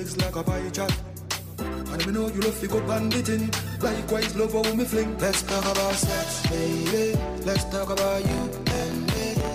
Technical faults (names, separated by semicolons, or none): filter restarted on every block